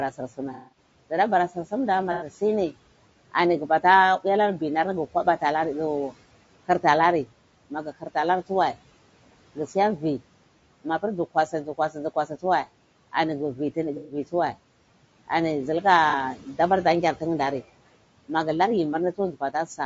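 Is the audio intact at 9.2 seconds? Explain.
No. At 9.2 seconds, as across the whole clip, the speech carries plainly audible low-delay AAC compression damage, likely from AAC-ELD at a rate that fits around 32 kbps. Its short frames resolve pitch harmonics poorly, leaving a rough, grainy texture, noise between the harmonics, and a thinned or synthetic-sounding top band. Room noise sits about 21 dB below the speech.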